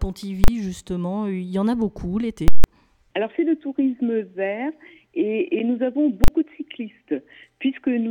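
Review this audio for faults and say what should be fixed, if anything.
Invalid numbers at full scale: a calculation produced infinite or invalid values, and the output was pinned to the largest positive or negative sample for whole blocks. The 40 ms blocks at 0.44 s and 6.24 s each land as a single loud bang. The 160 ms block from 2.48 to 2.64 s is heard as a very loud pop at each edge with nothing in between. Guard the processing path so invalid results are caught and muted or reset instead of reaching the output.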